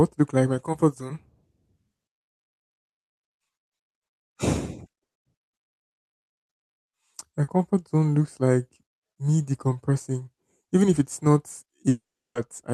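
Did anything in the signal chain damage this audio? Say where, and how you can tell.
Yes. A burst of packet loss in the network path removed about 120 ms at 5.03 to 5.17 s. Concealment left about 120 ms of silence before the speech resumed past the gap.

A short concealed packet loss at 7.43 s left the decoder 40 ms to synthesise. It heard as a brief smear before blending back into the real speech.

From 11.89 to 12.37 s, the last sound is continued and fades, then about 350 ms of silence, with 460 ms missing. A long network dropout is the likely cause.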